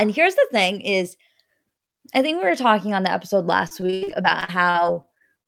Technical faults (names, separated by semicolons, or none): repeated packet loss (robotic sound)